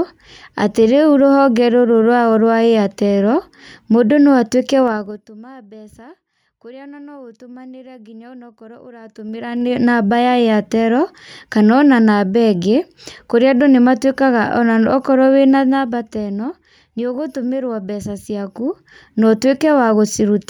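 Zipper noise at 4.83–5.29 s, 8.96–9.85 s, 15.46–16.35 s and 18.20–19.41 s: level shifts of roughly 25 dB and then 10 dB move in unsmoothed steps, about twenty a second, each clicking into an audible ticking zip.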